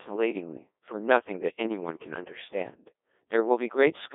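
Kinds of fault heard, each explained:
Codec 2 vocoder: The speech comes out robotic and buzzy from start to finish. The decoder does not preserve the original waveform. It rebuilds each sound from sine waves, using only pitch, voicing, energy and a rough spectral envelope, and the damage is heavy, which fits a rate around 1.2 kbit/s. The band runs from about 300 Hz to 3.6 kHz, with nothing above 3.8 kHz. A simple narrowband filter would dull the sound but keep it human, whereas this synthetic buzz points to a vocoder.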